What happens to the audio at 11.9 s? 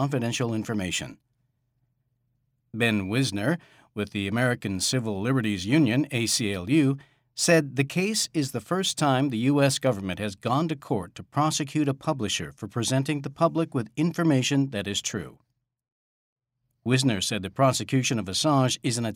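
Nothing goes wrong at 11.9 s; the audio plays through that moment intact, with no dropout, click or other fault.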